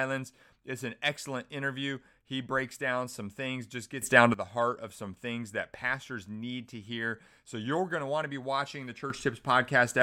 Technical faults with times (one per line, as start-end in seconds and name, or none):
4.02-4.34 sudden gain jump
9.10-10.03 sudden gain jump